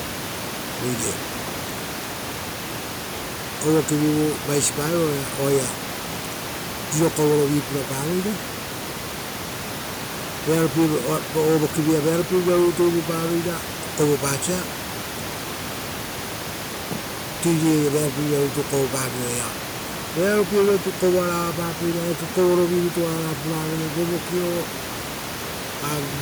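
No technical faults are audible anywhere in the speech, and the only thing underneath it is the room's own ambient noise, sitting about 12 dB below the talker.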